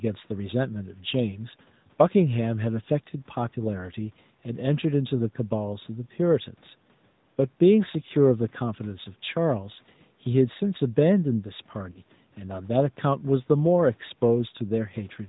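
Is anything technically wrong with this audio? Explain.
Yes, two faults can be heard.

Throughout, the speech carries AMR narrowband mobile codec damage. Nothing passes above 4 kHz, and the plainly audible buzzy, synthetic edge points to a mid-rate mode near 10.2 kbps. This is a pulse-driven vocal-tract model, not a simple low-pass filter, which would dull the sound without adding that buzz.

From 11.92 to 12.02 s there are lost AMR speech frames. The decoder reuses the last good pitch and vocal-tract settings at falling gain, which fits about two 20 ms frames going missing. The result is a brief warbly, drawn-out sag, not a hard click or a clean dropout to silence.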